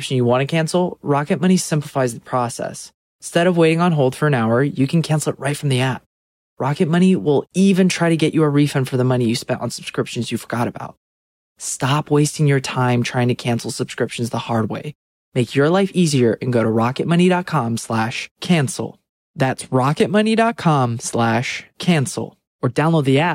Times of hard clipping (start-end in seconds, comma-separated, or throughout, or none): 19.76-20.02